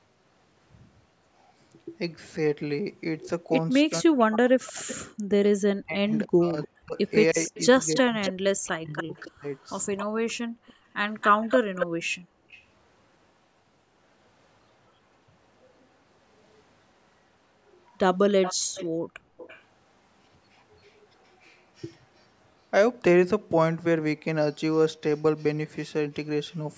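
From 3.86 to 9.46 s, the echo canceller likely could not separate speech in double talk and turned it down, so the speech is suppressed in double talk, dipping by as much as about 40 dB over roughly 3 s in total. Overlapping this, from 6.14 to 12.6 s, an echo leak sends back a copy of the speech delayed by 271 ms, about 10 dB below it. At 10.48 to 10.6 s and 12.12 to 12.51 s, background gated by the echo canceller makes the room sound drop by about 37 dB and then 30 dB before recovering. From 18.42 to 19.63 s, another echo leak returns a 332 ms delayed copy about 15 dB down, and within it, from 18.55 to 18.74 s, the background is gated by about 23 dB. The call microphone processing leaves nothing above 8 kHz.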